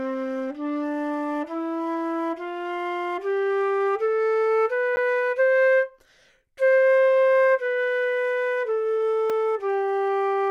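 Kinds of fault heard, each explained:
Block of digital silence: two brief dropouts, about 10 ms at 4.96 s and about 2 ms at 9.30 s, each too short to register as silence and heard as a tick or dip. The audio stops and restarts abruptly, a run of zeros standing in for the signal, typically when the output buffer isn't filled in time.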